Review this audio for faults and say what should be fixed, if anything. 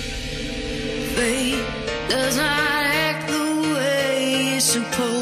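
No faults heard here, so nothing needs fixing.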